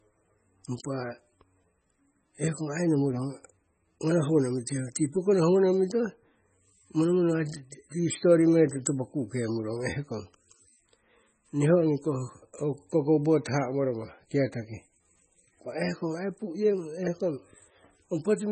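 Speech heard through heavy MP3 compression throughout, most likely at about 16 kbps: a spectrogram shows nothing above 8.3 kHz, with flickering, patchy high bands giving watery, swirly sibilants.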